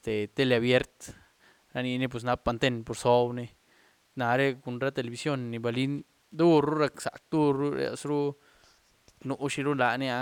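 Nothing in the speech stood out as a technical fault on listening.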